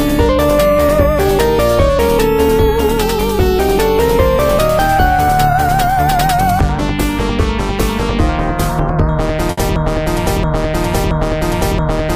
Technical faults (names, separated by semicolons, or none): burst of packet loss; broken-record loop